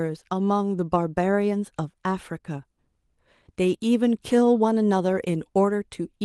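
No technical faults can be heard in this speech.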